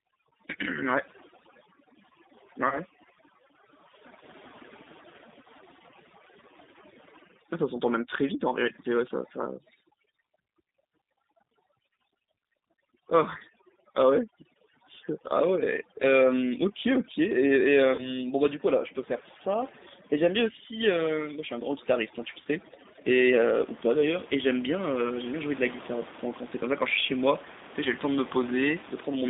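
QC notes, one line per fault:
Throughout: G.729 codec. The whole clip has been through an 8 kbit/s speech codec, and the damage is plainly audible. The line is confined to roughly 200 Hz to 3.7 kHz, so sibilants and breath detail above that are gone. Because the decoder rebuilds each 10 ms frame from a vocal tract filter, a pitch predictor and a handful of pulses, the speech comes out slightly rough and synthetic. The room noise sits about 18 dB below the speech and picks up a warble from the same modelling.
2.69 s to 2.78 s, 17.95 s to 18.09 s, 22.42 s to 22.47 s: VoIP packet loss concealed by the speech codec. Each event is a single 30 ms gap. The decoder covers it by repeating its last pitch and filter state at falling gain, which produces a short buzzy or noisy stretch in place of the missing audio. Each frame is predicted from the one before, so the distortion lingers past the gap until the decoder resynchronises. 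That is why the affected stretches run from about 50 ms to 140 ms.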